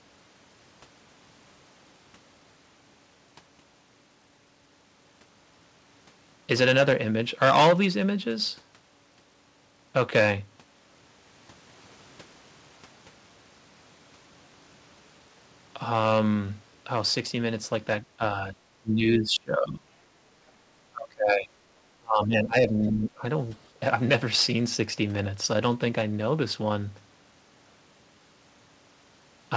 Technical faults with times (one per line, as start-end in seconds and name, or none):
18.02-19.89 speech suppressed in double talk
20.90-21.53 speech suppressed in double talk
21.98-23.24 speech suppressed in double talk